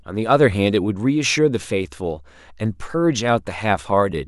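No technical faults can be heard anywhere in the speech recording.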